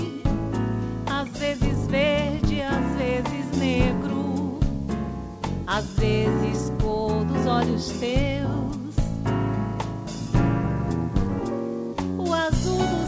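No technical faults can be heard anywhere in the clip. The audio has passed through a call path and has nothing above 8 kHz, which fits a wideband call codec such as G.722.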